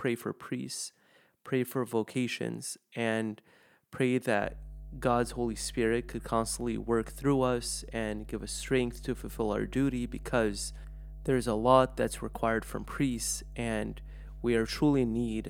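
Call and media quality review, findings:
Mains hum, 4.41 s to end of clip, starting right after "for vocations and pray": ground loop or nearby transformer couples 50 Hz power line into signal path. Result: steady low 50 Hz tone with low harmonics under the speech, roughly 15 dB below it.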